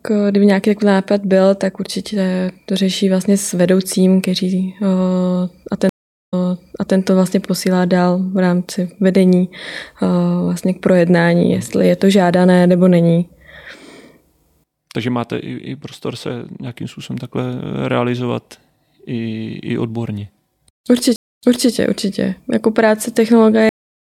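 At 5.89 s the speech goes silent for 428 ms, then picks up again 653 ms earlier, repeating a stretch; at 21.16 s a 230 ms gap is followed by a 340 ms repeat. Both are stream reconnects: the connection dropped and a fresh decoder restarted mid-stream from resent data. At 23.69 s the sound stops abruptly into dead silence, with no natural decay. This cut-off end means the final buffers were never written or played.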